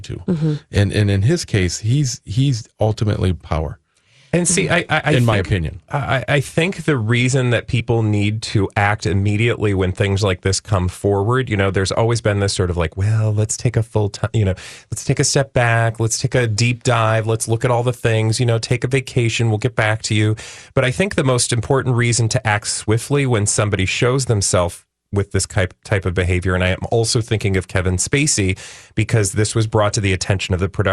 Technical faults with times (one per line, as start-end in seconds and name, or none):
7.79 compressed frames skipped